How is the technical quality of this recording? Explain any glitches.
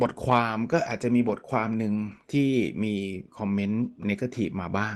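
There is one glitch, a lost packet rebuilt from error correction, from 1.95 to 2.13 s. A short run of packets went missing, but each following packet carried a low-bitrate backup copy, so the Opus decoder played those copies instead of leaving a gap. About 100 ms of speech was reconstructed, which fits roughly five 20 ms packets. That stretch sounds coarser and grainier than its surroundings, with audible coding noise, but there is no dropout. The speech itself passes through an Opus call path at 24 kbps, with high frequencies rolled off above 12 kHz.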